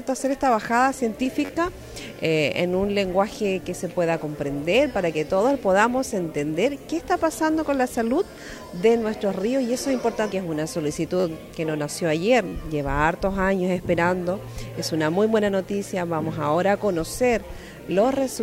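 At 1.45 s, 11.2 s and 12.48 s there's a repeated buffer fault. New audio didn't reach the output in time, so the device played its last block again, four extra times in a row. Each block is about 10.7 ms, which fits a 512-sample buffer, so each event runs about 43 ms. Repeats that short fuse into a brief, hard-edged buzz at roughly 94 Hz rather than an obvious stutter. Essentially no audio goes missing around them.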